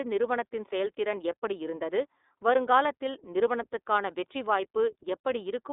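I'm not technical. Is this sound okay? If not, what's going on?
No. For the whole clip, the speech went through the iLBC codec, a phone-call compressor that codes every 30 ms slice on its own and drops everything above 3.8 kHz. The voice sounds muffled, phone-like, and plainly rough and slightly synthetic.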